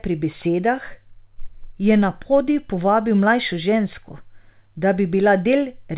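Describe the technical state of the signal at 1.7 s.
At 1.7 s the speech is intact, carried cleanly through the WebRTC call path with no fault present, its content stopping at 4 kHz as the narrowband G.711 A-law codec allows.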